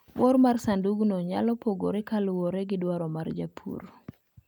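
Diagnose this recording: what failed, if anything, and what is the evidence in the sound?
Nothing failed here that I can hear; the speech runs along steadily without a break, glitch or dropout anywhere in the recording.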